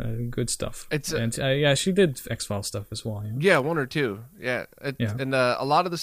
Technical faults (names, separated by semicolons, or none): low bit depth with noise shaping